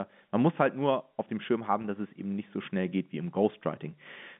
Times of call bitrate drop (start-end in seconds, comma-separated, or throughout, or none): none